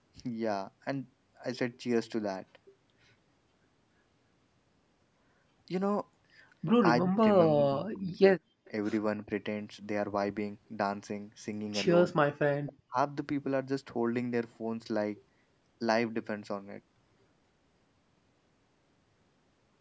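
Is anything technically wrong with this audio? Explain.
Yes. Speech suppressed in double talk occurs at 7.02 to 7.21 s, 7.49 to 8.22 s, 9.25 to 9.30 s, 12.38 to 12.48 s and 12.65 to 12.97 s. The likely cause is both sides talking at once, so the echo canceller turns the talker down with the echo. The speech dips by anywhere from about 10 dB to about 40 dB, briefly cutting out.

An echo leak appears at 8.65 to 8.70 s. A faint scrap of the voice returns 281 ms late, roughly 35 dB below the speech. It was likely left over when a loudspeaker's sound reached the far side's microphone and its canceller missed some.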